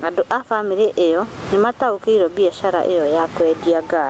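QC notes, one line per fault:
Throughout, gain pumping: the gain swings by something like 20 dB, so loud and soft parts end up closer in level and the whole thing sounds squashed. That's likely the mic gain cranked way too high with a fast limiter clamping down on each loud syllable and letting go in the gaps, heard through the 8 kHz top end of the call codec.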